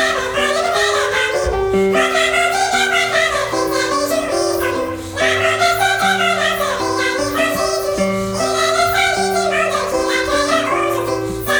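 Throughout the clip, the audio is read two samples at a time (double speed): frames are taken as sample pairs, so everything plays twice as fast and an octave (12 semitones) higher.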